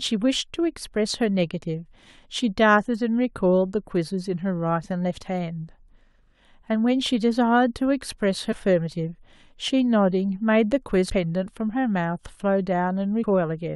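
Compressed frames skipped at 8.51, 11.09 and 13.22 s: several 23.2 ms frames go unplayed each time, so the speech jumps ahead by roughly 150 ms, then about 100 ms twice.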